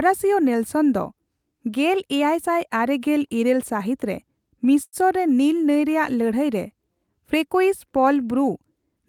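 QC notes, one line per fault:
4.83–4.96 s, short stall from a late packet: the jitter buffer ran dry, so the last sound was stretched about 93 ms, nothing lost, with playback continuing 93 ms later.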